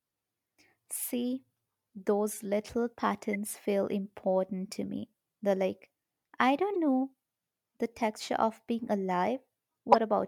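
At 3.33 to 3.36 s, 6.74 to 6.76 s and 9.92 to 9.96 s, a corrupt frame decoded: damaged bits across a couple of frames misplace energy, giving brief chirp-, blip- or noise-like bursts, the last much louder. Unlike a dropout or concealed loss, this adds foreign sound rather than a gap.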